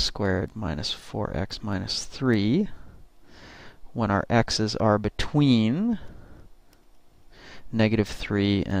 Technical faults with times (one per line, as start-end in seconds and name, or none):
none